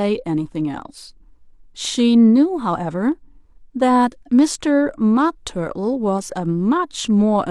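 No technical faults are audible anywhere in the recording.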